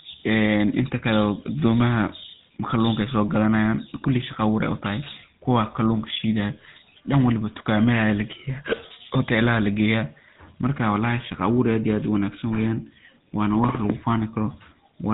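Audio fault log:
Throughout: GSM full-rate codec. The speech carries the buzzy, gravelly roughness of the original GSM coder, plainly audible across the whole clip. The codec rebuilds the voice from a vocal-tract model excited by a regular pulse train that keeps only a third of the excitation samples, so fine detail becomes a coarse buzz. Nothing is heard above 3.8 kHz, which dulls sibilants. The damage points to a coder running at about 13 kbps.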